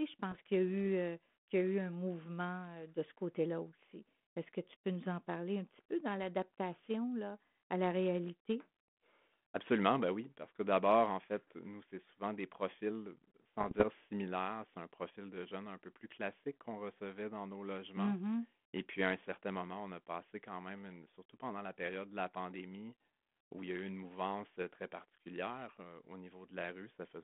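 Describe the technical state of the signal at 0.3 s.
At 0.31 to 0.35 s, just before "qu'il y a eu", there are bit errors on an ADPCM link. A few flipped bits throw off the decoder's step size and predictor, so the error rings on briefly as a rough pop and level wobble in the 32 kbit/s G.726 audio.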